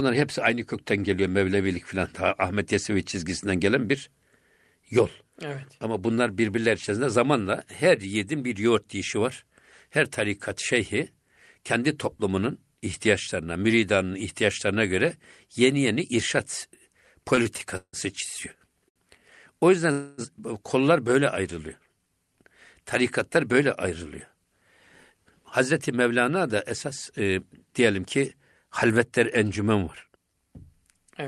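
From 17.35 to 17.96 s there's a stutter, repeated stalls where the jitter buffer kept running dry: four gaps, the longest 162 ms, so the speech drags. At 18.89 to 18.99 s comes a short stall from a late packet, with about 67 ms of stretched sound and a slight held-over buzz or dip. Then from 19.92 to 20.21 s the sound freezes into a fading buzz or hiss for about 262 ms before resuming where it left off, likely a call audio freeze from packets held up on the way.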